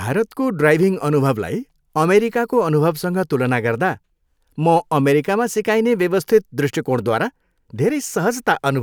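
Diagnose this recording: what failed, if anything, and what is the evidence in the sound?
Nothing failed in this recording, and the sound gives no evidence of a fault at any stage.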